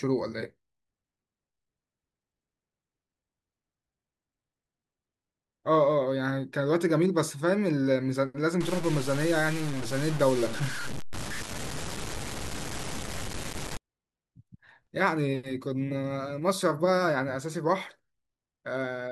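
Low bit depth without dither runs from 8.61 to 13.77 s. The speech turns grainy and rough, with distortion only about 10 dB below the signal that tracks each syllable and sputters in quiet stretches. The likely cause is truncation to around 5 bits without dither.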